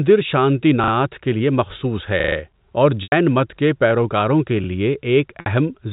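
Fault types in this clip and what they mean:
Repeated buffer: The playback ran dry, so the last chunk of audio got played again. Each repeat lasts about 40 ms, which fits a 40 ms buffer. It plays twice extra at 0.84 s before "کے لیے مخصوص", four times at 2.2 s, and once at 4.64 s, giving quick hard-edged stutters.
Packet loss with pitch repetition: Missing packets were patched by looping the last pitch period, so the sound briefly holds as a buzzy tone, then fades into silence before the speech returns with a short cross-fade. The gaps run about 90 ms at 3.03 s, just before "مت کے پیروکاروں کے", and 60 ms at 5.4 s, which points to roughly 30 ms packets.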